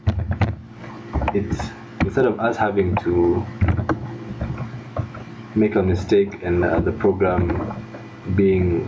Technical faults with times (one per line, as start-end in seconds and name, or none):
0.00-8.87 gain pumping